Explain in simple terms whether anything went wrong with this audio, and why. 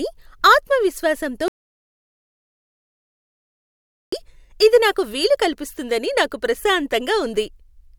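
An audio dropout to silence runs from 1.48 s to 4.12 s, wiping out about 2.6 seconds of the speech. The voice stops abruptly mid-flow and then picks up again just as suddenly. In between there is dead silence, not even the faint background hiss of the room. That points to the input signal being lost for a moment, likely a loose connection, a failed link or an accidental mute, while the recorder kept writing pure silence. Whatever was said during that gap cannot be recovered.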